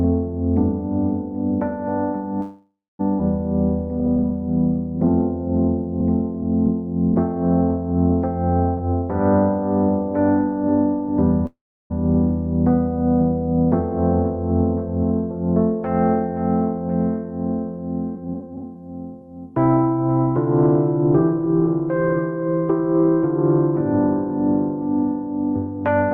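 From 2.41 to 3.01 s there is a call audio freeze. The last sound carries on as a fading fill, then goes silent for its final 0.23 s. Held-up packets likely drained the jitter buffer, so 0.58 s of gap is inserted and nothing is lost.

A skip ahead follows at 3.19 to 3.21 s. Roughly 0.4 s of audio is dropped, and the two sides are joined almost directly.

From 4.00 to 8.67 s, a jitter buffer slow-down repeats pitch periods to rebuild a reserve. Playback runs at 97% speed, adding 131 ms with the pitch unchanged.

A jitter buffer speed-up then runs from 8.74 to 11.17 s. Short pitch periods are cut, about 0.3 s in total, so the sound plays at 110% and feels hurried.

A second call audio freeze comes at 11.46 to 11.92 s. The fill lasts 0.44 s, most of it silence, 0.34 s. It likely comes from the jitter buffer running empty, and the audio resumes where it stopped.

From 18.15 to 19.54 s, a stronger speed-up plays at 134%. 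It removes about half a second, and the sound is noticeably rushed at the same pitch.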